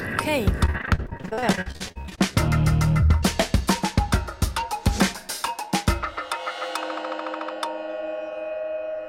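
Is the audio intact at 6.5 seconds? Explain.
Yes, the audio is intact at 6.5 seconds, with no dropout, click, distortion or other fault at that moment.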